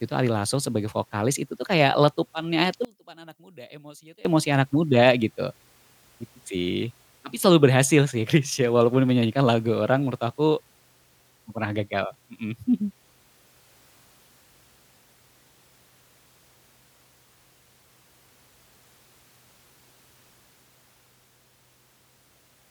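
From 2.85 to 4.25 s, just after "itu tuh kayak letupannya", the speech suddenly drops by about 26 dB and turns faint, before returning in full at "emosi anak muda gitu". This points to one channel inverted, likely a polarity flip on one side of the stereo pair. When the two sides are summed to mono, the centred speech they share cancels, leaving only the small differences between them.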